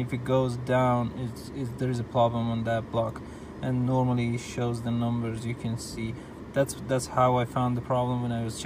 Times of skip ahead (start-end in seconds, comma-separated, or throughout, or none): none